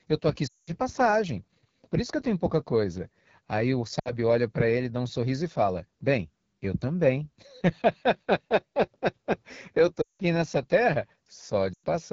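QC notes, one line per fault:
Throughout: AMR wideband (HD Voice) codec. The speech has that rough, raspy edge you get at the bottom of the AMR-WB ladder, which fits a rate around 8.85 kbit/s. Below 6.4 kHz the codec rebuilds the voice from a pulse excitation and a vocal tract model. At this rate there aren't enough bits to do that cleanly, and the top band up to 7 kHz is just shaped noise. The damage is plainly audible.
0.47–0.71 s, 4.00–4.13 s, 10.01–10.22 s, 11.74–11.84 s: lost AMR speech frames. Each gap is the decoder covering for frames that failed their checksum. It repeats the last good pitch and vocal tract settings at falling gain, so the sound smears and then sinks toward silence quickly, as wideband concealment does. The longest gaps run about 200 ms at 0.47 s and about 180 ms at 10.01 s, which fits runs of roughly nine or ten 20 ms frames. The shortest, about 60 ms at 4.00 s, is a run of three frames.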